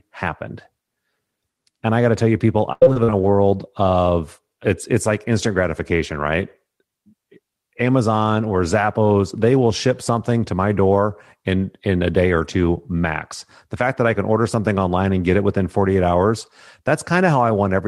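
From 2.72 to 3.81 s there is repeated packet loss, giving a robotic sound. Six gaps fall in about a second. Each is patched by stretching the last sound. The longest lasts 90 ms. About a fifth of the stretch is concealed, so the speech turns choppy.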